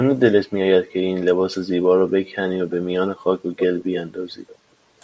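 A speech clip with an echo leak from 3.57 to 4.01 s. A fainter copy of the speech returns about 326 ms late, roughly 10 dB below the direct sound. The likely cause is a loudspeaker on the far end whose echo canceller let some of the speech back into the call.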